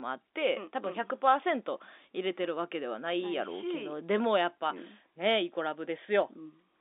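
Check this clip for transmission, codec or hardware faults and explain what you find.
No transmission, codec or hardware faults can be heard.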